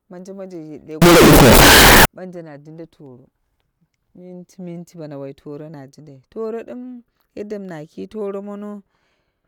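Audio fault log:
1.02 to 2.05 s, signed and unsigned mixed up. The speech turns into a blast of very loud, harsh distortion for about one second. Quiet moments are as loud as the rest. The likely cause is 16-bit signed samples being read as unsigned, or the reverse. That flips the top bit of each sample. Every zero crossing then becomes a jump across the full range, so small waveform swings become full-scale steps.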